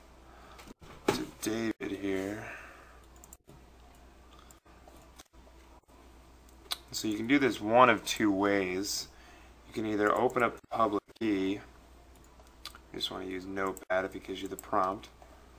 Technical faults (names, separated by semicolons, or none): none